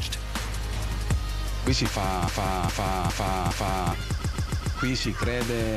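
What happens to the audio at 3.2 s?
The player or stream likely stalled, resending its last fragment: a broken-record loop from 2.28 to 3.92 s, one 0.41 s piece repeating four times.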